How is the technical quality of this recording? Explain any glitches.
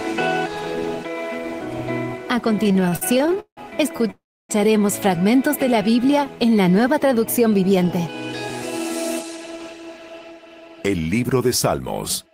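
The recording has a cluster of network-timing glitches between about 2.6 and 4.5 s, then a stretch of hurried playback from 6.9 to 8.8 s.

From 2.63 to 3.59 s there are repeated stalls (stutter). Packets kept turning up late, so the jitter buffer ran dry fourteen times in under a second. Each time the receiver held the last bit of sound until it could carry on, filling about 392 ms in total, about 41 percent of that span. The longest wait was 171 ms, long enough to fade. Nothing is lost, but the audio drags and stutters along.

Right after that come two short stalls from a late packet, at 3.97 to 4.01 s and 4.07 to 4.11 s. In each, one packet wasn't there on time, so the receiver stretched the last sound for 24 ms and then 15 ms before picking up exactly where it left off. You hear a sound held a touch too long, with a slight buzz or dip, and no content drops out.

The second stall leads straight into a call audio freeze from 4.11 to 4.51 s. 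The audio hangs for about 385 ms. The held sound decays into about 290 ms of silence before playback resumes from the same point. The likely cause is packets held up in transit, emptying the jitter buffer, with the receiver padding the wait. The result is an inserted gap rather than missing material.

From 6.92 to 8.80 s you get a jitter buffer speed-up. The buffer was carrying more audio than it aims for, so the receiver trimmed it back by cutting tiny pitch-period-sized slices over and over. That removed roughly a tenth of a second in total. Playback runs at about 106 percent speed with the pitch unchanged, so that passage sounds a little rushed.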